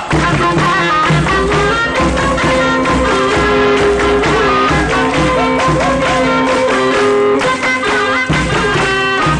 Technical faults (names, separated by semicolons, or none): none